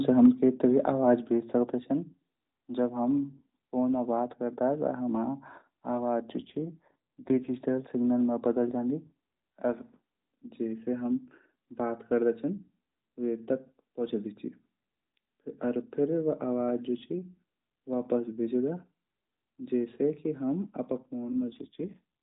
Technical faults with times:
0.19-0.26 microphone overload
0.26 microphone volume stepped down
1.26 microphone volume stepped down
6.39-7.50 AMR rate drop
21.23-22.01 AMR rate drop

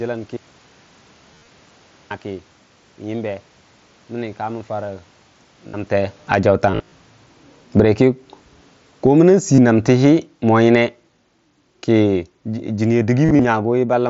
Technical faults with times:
1.34-1.48 concealed Bluetooth headset packet loss
5.68-5.74 concealed Bluetooth headset packet loss
6.16-14.05 automatic gain falling
6.71-6.92 concealed Bluetooth headset packet loss
9.55-9.58 concealed Bluetooth headset packet loss
13.25-13.45 concealed Bluetooth headset packet loss

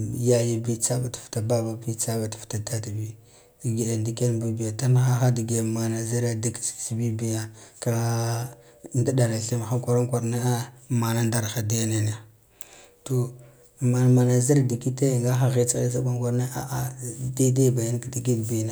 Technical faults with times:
none

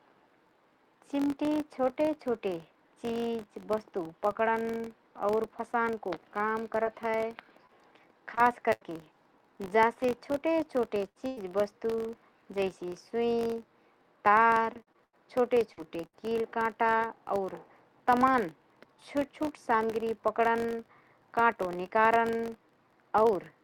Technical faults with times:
0.00-23.64 filter restarted on every block
6.83-8.83 scattered short gaps
11.09-11.39 burst of packet loss
11.37 lost packet rebuilt from error correction
14.29-16.15 repeated packet loss (robotic sound)

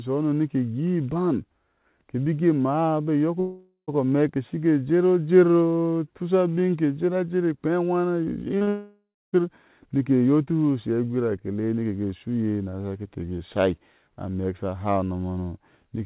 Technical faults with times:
3.40-3.90 long network dropout
8.58-8.69 short concealed packet loss
8.69-9.35 long network dropout

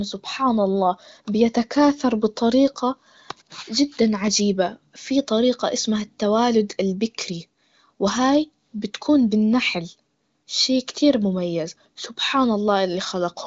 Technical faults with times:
none

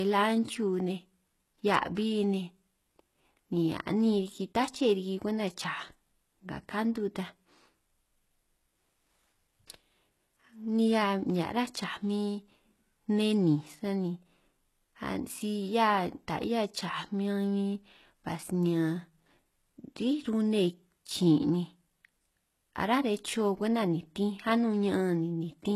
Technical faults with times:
0.00-25.75 HE-AAC compression

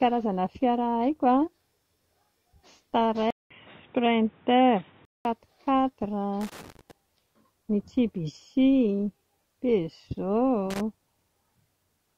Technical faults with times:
3.30-5.25 input switched to a poorer device
6.41-6.91 loose connector crackle
10.70-10.81 loose connector crackle

